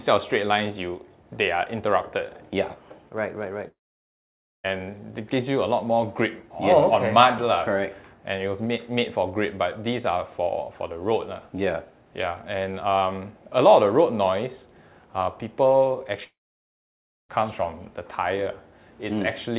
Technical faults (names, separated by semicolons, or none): long network dropout